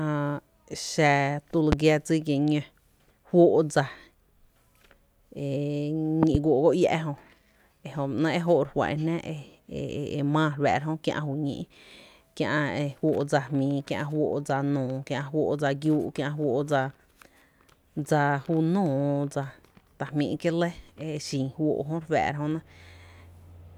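At 1.72 to 1.75 s a single loud pop cuts through the speech, roughly 20 dB above it. At 6.23 to 6.37 s two pops follow in quick succession, somewhat quieter. The likely cause is a sudden voltage pulse added to the signal.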